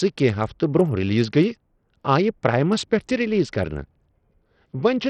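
A speech recording, and from start to finish the top end flickers and thins while a gritty, grainy noise clings to the voice, with aliasing in the upper range and nothing at all above 16.9 kHz. The damage is heavy, and it likely comes from Bluetooth SBC compression at a starved bit pool that points to roughly 64 kbps: the highest sub-bands are left with few or no bits, and the remaining bands are quantised so coarsely that they turn rough.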